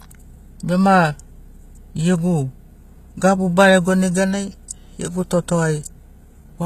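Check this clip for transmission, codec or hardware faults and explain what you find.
One fault runs through the whole speech clip: HE-AAC compression. The treble sounds bright but synthetic, with a gritty, metallic edge on the upper frequencies, and nothing is present above about 14.9 kHz. The likely cause is a spectral band replication codec: only the lower spectrum is actually coded, and the top is rebuilt by copying lower bands upward under a coarse envelope, so harmonics no longer line up. The plainly audible damage fits a low bitrate of around 20 kbps.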